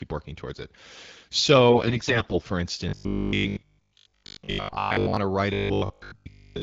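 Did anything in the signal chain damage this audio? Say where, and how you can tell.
Yes. From 1.7 to 2.39 s, AMR bit errors on the radio link corrupted the AMR-WB stream, which otherwise runs at 12.65 kbit/s with only light coding damage. The frames still passed their check on the critical bits, but around one bit in ten in the weaker-protected fields was flipped. The decoder then placed excitation pulses wrongly and used slightly wrong pitch, gain and spectral values. Pitch and level hold roughly steady while the sound turns hoarse, scratchy and gargly.

The robotic sound from repeated short buffers is likely a driver or buffer stage that is starved of fresh audio. It appears from 2.89 to 5.17 s, ending just before "to write", and again from 5.54 to 6.62 s, starting just after "to write". A steady 50 Hz buzz fits a 20 ms block being replayed while new audio is dropped, with most of the output being repeats. 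The sound becomes a rigid, metallic drone that only loosely follows the original contour.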